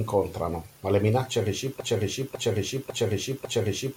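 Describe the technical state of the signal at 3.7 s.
At 3.7 s the signal is caught in a broken-record loop. It began at 1.80 s, just after "ma le minacce", and runs to the end of the clip. A fragment of about 0.55 s repeats exactly, back to back, four times. The speech sounds stuck, stuttering the same syllables over and over. The likely cause is a stalled player or stream resending its last buffered piece. The speech that belonged there is lost.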